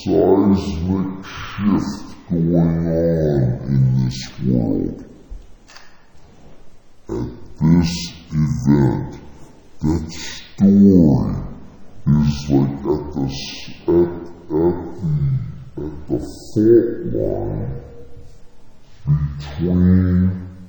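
From start to finish, stereo read as mono: interleaved left and right samples are taken as one channel, so the audio plays at half speed and a full octave (12 semitones) low, sounding slow and heavy, with a faint mirrored copy in the upper spectrum.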